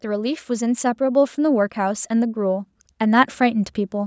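From 0.05 s to 3.76 s, automatic gain rising: the gain control judged the input too quiet and kept raising it, by about 7 dB overall. Speech and background swell together steadily, within the call microphone processing's band that stops at 8 kHz.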